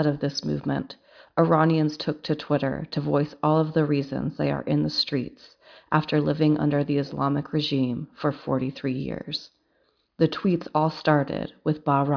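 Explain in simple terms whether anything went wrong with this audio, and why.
Nothing went wrong with this speech recording that a listener can pick out. No moment in it sounds like a technical problem.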